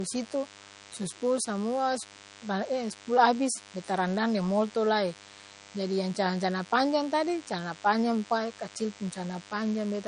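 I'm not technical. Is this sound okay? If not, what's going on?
No. A thin, steady buzz runs under the speech for the whole clip. This is DECT cordless phone buzz: a nearby cordless phone or its base sends a radio pulse every 10 ms, and the recording equipment picks it up as a 100 Hz hum.

The speech also sounds dull and muffled throughout, with nothing above about 10.6 kHz. This is likely low-bitrate audio saved at a high bitrate: a heavily squeezed MP3 was later resaved as a large MP3, which can't restore the lost detail.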